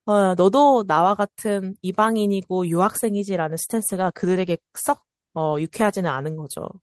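From 3.88 to 6.27 s, a call bitrate drop makes the encoder code the speech more coarsely, fitting a fall from 32 to 16 kbps. The sound turns rough for about 2.3 s.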